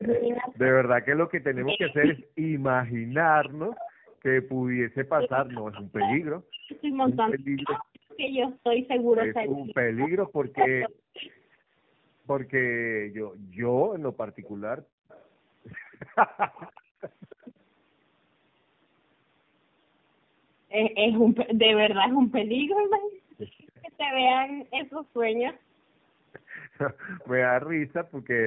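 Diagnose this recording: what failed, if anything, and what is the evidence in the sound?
Tandem speech coding, throughout: two low-rate speech codecs in sequence, plausibly G.729A then AMR-NB, stack their artefacts, leaving rough, warbly speech with nothing above 3.6 kHz.

Echo leak, 0.56 to 8.15 s: a faint copy about 25 dB down trails the speech by 288 ms, likely a far-end loudspeaker echo the canceller failed to fully remove.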